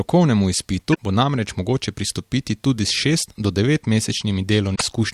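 Speech with damaged data in a compressed stream at 0.90–0.98 s, just before "bo namreč mogoče pristopiti", and at 4.72–4.83 s: misread frames cause brief glitches where the decoder loses sync.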